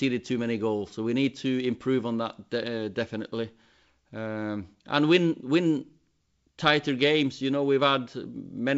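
No technical faults can be heard in this speech recording, which carries the bandwidth of G.722 wideband telephone coding, clear up to about 7 kHz and consistent with the codec's full 64 kbit/s rate.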